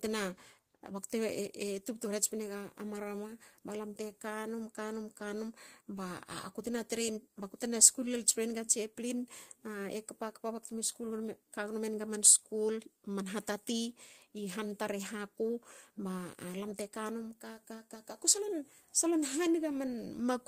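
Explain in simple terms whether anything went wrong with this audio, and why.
Yes, two related problems run through this speech. There is clock drift between sender and receiver: the sending device's clock runs about five percent fast, so audio arrives slightly quicker than the receiving end plays it, and a backlog keeps building.

To keep up, the receiver makes repeated timing corrections from 0.07 s to 20.19 s, trimming tiny slices so playback effectively runs at 105 percent. These small cuts are unevenly spaced.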